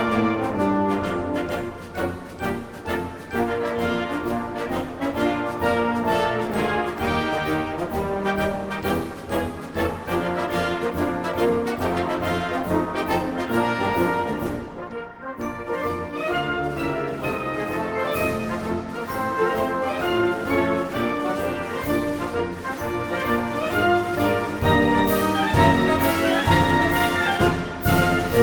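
From 10.47 to 13.75 s the audio runs at about 107% speed with its pitch unchanged, a jitter buffer speed-up. Delayed packets had piled up in the receiver's buffer, so it trimmed short slices of one or a few pitch periods, over and over, removing roughly a fifth of a second in total. The passage sounds rushed. Unlike a clock or sample-rate error, which speeds the sound up and raises its pitch together, the pitch here stays put.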